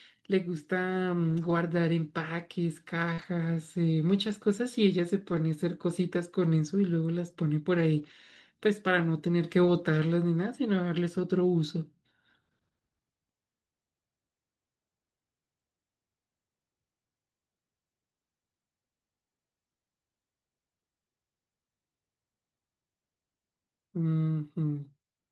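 At 1.29 to 1.51 s there's lost packet rebuilt from error correction: the speech turns rougher and noisier while the decoder plays low-bitrate backup copies, with no gap. At 3.13 to 3.20 s a short concealed packet loss shows up as a brief smear, where roughly 40 ms never arrived and got patched by extending the preceding sound. That same rough, grainy patching from error-correction copies comes back at 3.18 to 3.24 s, 4.28 to 4.34 s, 5.32 to 5.38 s, 7.98 to 8.12 s, 9.64 to 9.70 s and 11.18 to 11.20 s.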